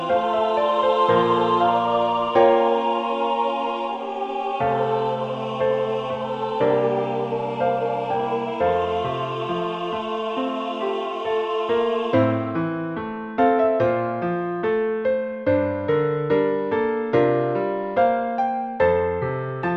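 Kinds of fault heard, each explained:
No technical faults can be heard anywhere in the audio. There is nothing to list under any kind.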